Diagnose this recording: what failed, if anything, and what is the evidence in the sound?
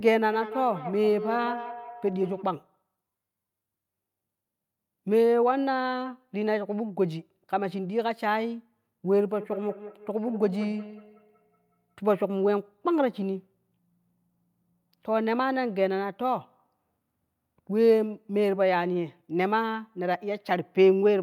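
Call processing: feedback echo between two devices at 0.33–2.5 s and 9.4–12.24 s. Speech recurs roughly every fifth of a second because neither echo canceller removes the other device's playback.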